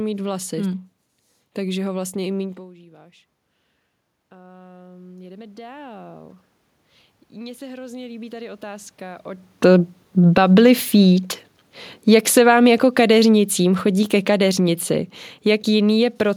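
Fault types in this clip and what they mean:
Automatic gain rising: from 4.29 to 6.1 s the input dropped about 22 dB, and the gain control crept up about 7 dB, swelling voice and room noise together; again 7.31–9.53 s, about 5 dB.
Automatic gain falling: from 12.01 to 14.87 s the gain control judged the input too loud or its background noise too strong and eased down about 4 dB, sinking voice and background together.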